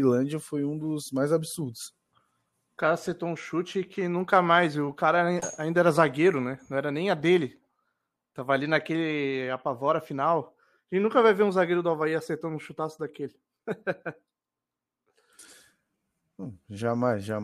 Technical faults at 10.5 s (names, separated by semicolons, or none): none